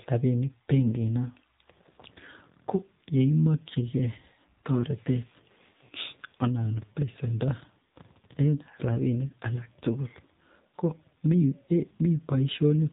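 From start to finish the speech has been through an AMR narrowband mobile codec, the old phone-network kind, and the damage is plainly audible. Everything stops at about 3.8 kHz, so it sounds boxed-in and dull. The codec rebuilds the voice from a vocal-tract model fed with a handful of pulses per short subframe, and here that gives a buzzy, synthetic edge, which fits one of the lower AMR-NB modes around 7.4 kbps.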